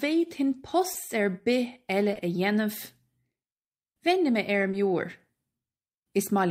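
Brief smears or wobbles at 0.93–0.97 s, 2.13–2.17 s and 4.71–4.75 s are short concealed packet loss: about 20 ms went missing each time, patched by extending the preceding sound.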